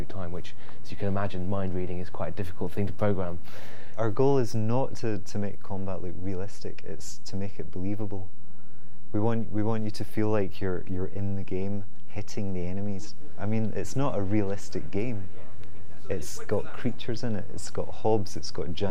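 From start to finish the audio carries a DC offset: the whole waveform sits displaced from zero by a constant amount, at about -19 dBFS. Nothing in the sound itself reveals it, since a fixed shift has no frequency to hear. Unlike mains hum or low rumble, which show as a 50 or 60 Hz tone or shifting bass energy, this is a single steady line at 0 Hz. It quietly eats headroom on one side of the waveform.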